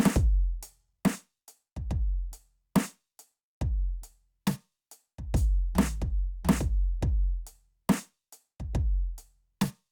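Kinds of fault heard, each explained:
No technical faults can be heard in the music; the signal holds steady throughout, with no interruptions, level disturbances or added noise.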